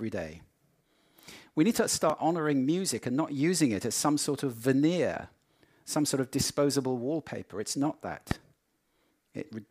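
Loud pop at 2.10–2.12 s and 8.31–8.33 s: sharp single thumps about 10 and 15 dB above the sound, likely a sudden voltage pulse.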